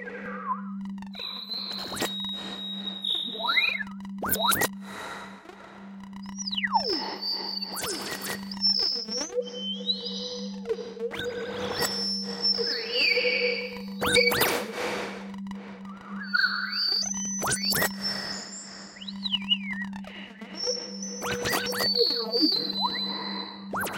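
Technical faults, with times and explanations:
0.26 s and 17.25 s, compressed frames skipped: a block of the compressed stream never reached the output, either missing from the file or rejected by the decoder as damaged, so playback jumps forward by roughly a tenth of a second each time, which fits a single frame of about 93 ms. At each join the sound resumes slightly further on than expected.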